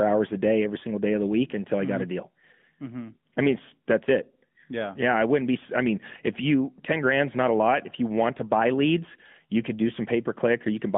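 AMR narrowband mobile codec damage runs through the whole clip. The speech is squeezed into roughly 150 Hz to 3.5 kHz and rebuilt from a vocal-tract model driven by sparse pulses. This leaves a plainly buzzy, synthetic edge that fits a mid-rate mode near 10 kbps.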